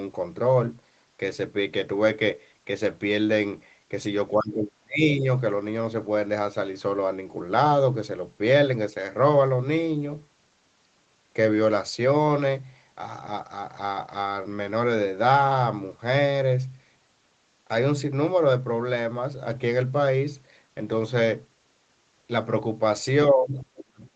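From 4.35 to 5.26 s the talker's voice drops sharply, by about 30 dB at its lowest, for about a second in total. This is speech suppressed in double talk, likely because the other side spoke at the same moment. The echo canceller could not tell the local voice from the loudspeaker echo, so it pulled both down. The same thing returns at 23.31 s and lasts to the end. Here the deepest drop is about 35 dB.

Inside that last stretch, from 23.58 to 23.8 s, a faint second voice comes through. It sits about 30 dB below the talker. This is the other side's voice leaking through, likely residual echo. The far end plays from the loudspeaker, and the canceller left a scrap of it in the microphone signal.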